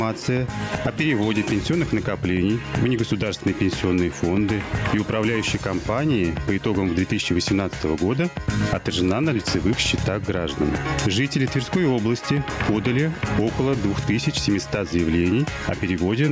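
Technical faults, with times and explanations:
Throughout, gain pumping: the level keeps swinging by something like ten decibels. That's likely the input gain set far too high for the mic, with a fast limiter or compressor clamping down on each peak and letting go afterwards. Loud and quiet parts end up squeezed together and the whole thing sounds squashed, on top of the call processing's band that stops at 8 kHz.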